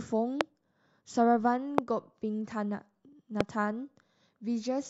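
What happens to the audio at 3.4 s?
A single loud pop sits on the speech from 3.41 to 3.43 s, far louder than the voice, around 20 dB above it. It is likely a voltage pulse from a plug, switch or static. Unlike a dropout, the speech carries on uninterrupted underneath.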